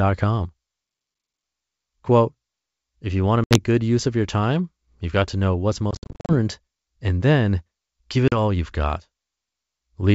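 At 3.44 s, 5.91 s and 8.28 s the speech drops out with packet loss on an ADPCM call. The gaps are hard-edged silences: 70 ms at 3.44 s (about seven packets), 280 ms scattered across 5.91 to 6.33 s...

Correction: 280 ms scattered between 5.91 and 6.33 s, longest 60 ms, roughly thirty packets, and 40 ms at 8.28 s. Each time, the decoder's adaptive predictor and step size lose sync with the sender, so the G.722 wideband speech returns with brief, slight distortion before settling.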